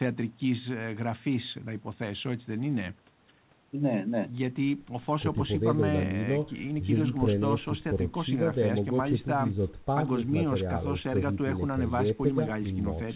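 Nothing's actually wrong with this speech recording: it came over a call line, so it's narrowband with nothing above 4 kHz, which is simply what a G.711 mu-law phone-quality path at 64 kbps delivers.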